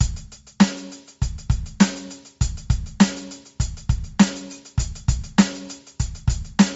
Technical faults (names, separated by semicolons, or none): Bluetooth LC3 compression